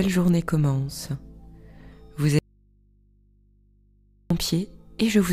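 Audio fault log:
2.39 to 4.30 s, audio dropout to a faint residue. The sound cuts out abruptly and stays gone for about 1.9 s. The gap is not silent. A low mains hum remains, roughly 35 dB below the normal signal level. The sound then returns just as suddenly. There is no fade at either edge, so it does not read as a pause. The likely cause is a brief loss of the wanted source while the path after the break stayed live, leaving the open input's hum audible.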